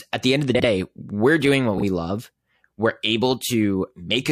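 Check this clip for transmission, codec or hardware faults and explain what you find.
Two faults of the same kind turn up in this speech. Frames out of order at 0.54 to 0.65 s, after "the end of the", and at 1.77 to 1.83 s, after "we're doing what": adjacent blocks of 46.4 ms and 23.2 ms were swapped, which fits two frames and one frame per block. Each stretch plays with its halves exchanged, giving a garbled flutter, and no time is lost.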